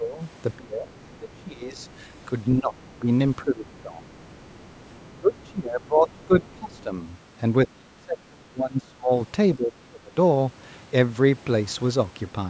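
A speech recording, band-limited by call microphone processing so that nothing appears above 8 kHz, in which the talker's level repeatedly sinks while a second, much quieter voice slips through. The speech suppressed in double talk is heard as the main voice ducking and breaking up from 0 to 1.89 s (roughly 25 dB down), 2.56 to 4.08 s (about 15 dB), 5.2 to 6.93 s (about 20 dB) and 7.66 to 10.14 s (nearly 30 dB). On a waveform these stretches show collapsed, ragged envelopes; on a spectrogram the harmonics thin and the upper bands fade in patches. The likely cause is an echo canceller attenuating everything while both ends talk. The other side's voice leaking through appears from 3.79 to 5.4 s and 6.4 to 6.83 s as faint speech roughly 30 dB below the talker. It shows as weak, separate harmonic traces beneath the main voice, likely loudspeaker echo that the canceller did not fully remove.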